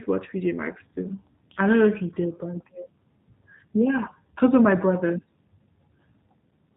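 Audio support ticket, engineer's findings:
G.729 codec throughout, 8 kbit/s. Speech band-limited, nothing above 4 kHz. Rough, synthetic texture from pitch-predictor and four-pulse excitation rebuild in each half of every 10 ms frame. Plainly audible damage.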